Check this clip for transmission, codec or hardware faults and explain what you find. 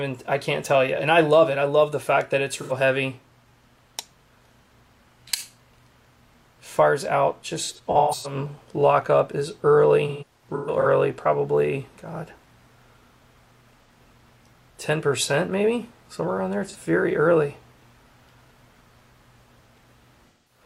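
Six patches of AAC frame loss with concealment occur, at 2.59–2.73, 7.63–8.35, 10.08–10.87, 13.84–13.89, 16.67–16.76 and 20.28–20.64 s. The decoder re-used the last good spectrum, so brief gaps sound smeared and phasey. The two scattered bursts, with runs up to about 150 ms, dip and fade back. On a spectrogram these show as blurred strips. The waveform shows a softened, decaying envelope.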